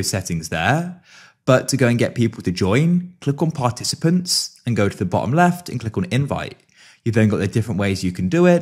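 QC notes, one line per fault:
Throughout: sample clock jitter. The converter clock wanders by a couple of microseconds, so samples land early or late and the error tracks waveform slope. It is heard as a fine hiss or roughness roughly 35 dB below the signal, strongest on loud, bright passages and gone in silence.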